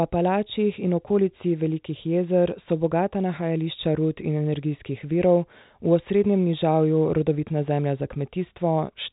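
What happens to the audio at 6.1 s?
Nothing goes wrong at 6.1 s: the speech carries on intact there, with only the narrow telephone band of G.711 coding, which lets nothing above about 3.8 kHz through.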